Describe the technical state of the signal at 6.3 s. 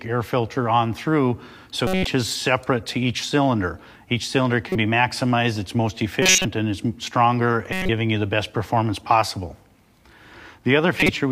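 At 6.3 s the audio is inside a short span of misplaced energy, a chirp, squeak, blip, noise burst or brief hole, running from 6.22 to 6.45 s. This is a corrupt frame decoded: bit errors hit about seven consecutive compressed frames, and the decoder played them anyway, misreading gains and codes and putting energy at the wrong frequencies.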